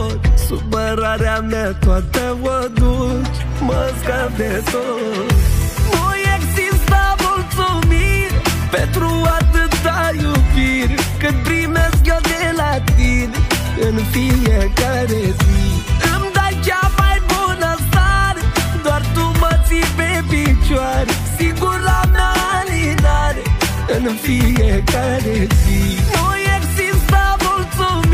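Nothing in this audio stands out as a technical problem: no dropouts, glitches or level trouble turn up anywhere along the way.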